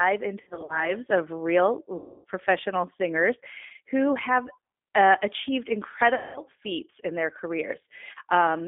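Speech carried over a G.729 codec link sits throughout in a narrow band of roughly 250 Hz to 3.6 kHz, with the slightly rough, synthetic edge of a coder that rebuilds each 10 ms frame from a vocal-tract filter, a pitch predictor and a few sparse pulses. The plainly audible coding damage fits an 8 kbit/s G.729A stream rather than a wider-band or higher-rate coder, which would keep more top end and less buzz. Three stretches show VoIP packet loss concealed by the speech codec. From 0.41 to 0.94 s, 160 ms of audio goes missing in scattered gaps over about 280 ms, the longest run lasting 60 ms. A single 280 ms hole follows at 1.96 to 2.25 s, and a 200 ms hole at 6.15 to 6.40 s. Instead of falling silent or clicking, as a plain dropout would, each gap is filled with a stretched, buzzy continuation of the last sound that fades out. Because each frame is predicted from the one before, the voice stays weak and smeared for a moment after the audio returns.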